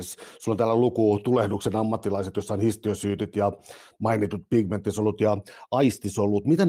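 No technical faults can be heard in the speech at any point, so there are none to describe in time order.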